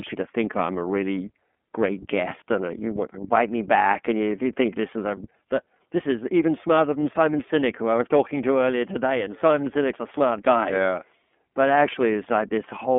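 Throughout, the speech sounds thin, rough and plainly synthetic, with nothing above 3.7 kHz, from the iLBC codec coding each 30 ms frame independently.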